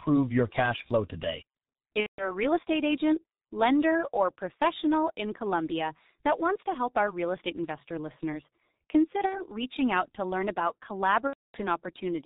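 From the start the speech carries heavy G.723.1 codec damage. The muffled, hoarse quality and smeared consonants point to this early telephony codec at about 6.3 kbit/s. Its 30 ms frames and slowly updated voice model blur fast transitions. On a spectrogram, energy stops sharply at 4 kHz, and formants look blocky and stepped rather than smoothly gliding.

Three gaps show VoIP packet loss concealed by the speech codec. In each, the decoder stretches its last pitch and filter settings while turning the gain down frame by frame. The first, from 2.00 to 2.36 s, hides about 180 ms, which fits six lost 30 ms frames. The second, 9.26 to 9.43 s, covers about 60 ms, and the third, 11.27 to 11.60 s, about 270 ms. Each sounds like a stretched buzzy tone or coloured noise that fades, and the speech stays weak briefly after each gap. A spectrogram shows frozen harmonic stripes under a decaying waveform envelope.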